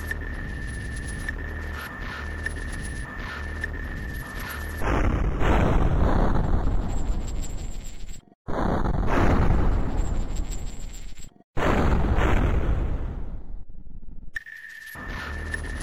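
No technical faults can be heard anywhere in the recording; the signal holds steady and continuous throughout.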